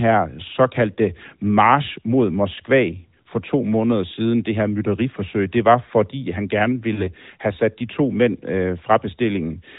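At 6.94 to 7.03 s there are lost AMR speech frames. About 40 ms of signal, which fits two consecutive 20 ms frames, failed to arrive intact, so the decoder repeated the last good pitch and vocal tract settings at falling gain. It sounds like a brief smeared hold that fades before the speech returns weak or rough for a moment. On a spectrogram, the harmonics flatten into a short constant smear below the narrowband 4 kHz ceiling. The waveform envelope sags, then recovers.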